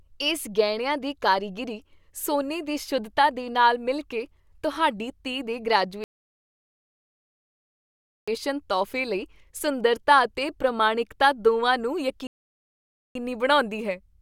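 At 6.04 s and again at 12.27 s the speech halts in a rebuffering stall: playback ran dry, went silent for 2.24 s and 0.88 s, then resumed exactly where it stopped. Both show as flat, empty gaps in the waveform and spectrogram.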